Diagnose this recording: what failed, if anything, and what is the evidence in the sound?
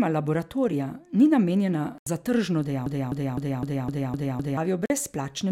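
The speech cuts to silence twice: from 1.98 to 2.07 s, about 81 ms, and from 4.86 to 4.90 s, about 41 ms. Edges are abrupt or fade over a few milliseconds. Speech resumes further on, as if it kept playing. This is likely a Bluetooth dropout at the wireless playback link, where late packets were discarded.

From 2.86 to 4.57 s, one 255 ms fragment repeats seven times, back to back, identically. It is a broken-record loop. The likely cause is a stalled player or stream resending its last buffer. The speech due in that span never plays.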